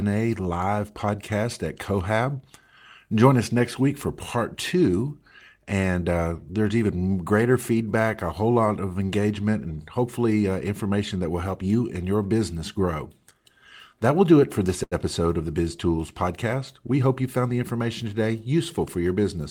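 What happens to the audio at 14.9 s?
Right after "do it for this", from 14.83 to 14.94 s, there is a short stall from a late packet. The jitter buffer ran dry, so the receiver held the last sound for about 82 ms with a faint buzz or dip, then resumed with nothing lost, just that much later.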